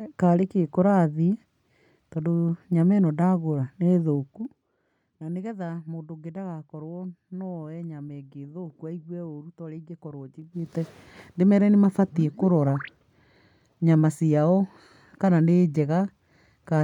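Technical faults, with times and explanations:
4.13 to 4.71 s and 10.38 to 10.73 s: zipper noise. The level drops by about 15 dB in the first stretch and rises by about 15 dB in the second, each time in unsmoothed 1 dB jumps, at around 20 steps per second, then around 40. Each abrupt gain jump puts a tiny discontinuity in the waveform, and the rapid series of these produces an audible ticking or zipping that rides on the sound only while the level is moving.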